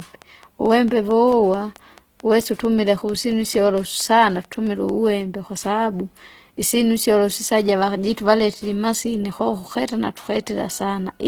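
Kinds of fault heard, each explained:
Opus compression: A low-rate codec, likely Opus in its music mode at a rate near 16 kbps, ran short of bits and filled bands with folded or noise-like energy. Throughout, the full-bandwidth speech is plainly damaged, sounding rough, grainy and noisy rather than swirly.
Train of clicks: A repeating pulse, likely interference or a faulty connection, entered the signal from the start until 4.9 s, just before "kwasababu isyinu syolo sisaja". About twenty similar clicks arrive evenly, 4.5 per second, roughly as loud as the speech.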